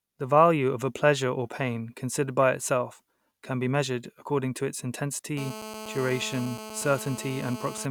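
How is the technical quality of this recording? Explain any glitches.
The recording takes a clear hit near the end. Right after "measured according to its", from 5.37 to 7.86 s, there's GSM phone buzz. A nearby 2G phone on a call bursts at 217 Hz, and the audio circuit rectifies those pulses into a steady, harsh, harmonic-rich rasp sitting about 13 dB under the speech.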